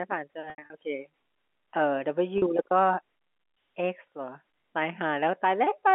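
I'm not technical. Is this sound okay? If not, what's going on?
No. The speech has two brief glitches caused by packet loss with pitch repetition. Around 0.50 to 0.70 s, small pieces of sound went missing in patches, the longest about 80 ms, and at 2.38 s a 40 ms piece was lost. Each time, the phone system filled the hole by repeating the last bit of voice, so you hear a brief held, buzzy tone, and in the longest gap it fades into a moment of silence before the voice returns. The narrow telephone sound is just the normal phone-line quality.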